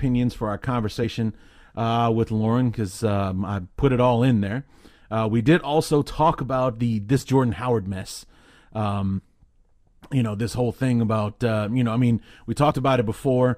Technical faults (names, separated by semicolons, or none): compressed frames skipped